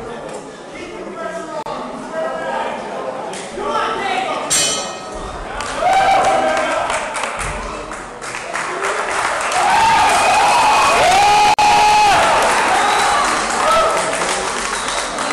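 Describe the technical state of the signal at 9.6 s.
At 9.6 s the signal is intact, with no dropout, clipping, glitch or other fault to be heard at that moment.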